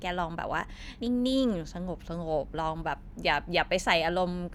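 At 0.96 to 0.99 s, compressed frames are skipped: the speech jumps ahead about 70 ms, consistent with several missing 10 ms frames.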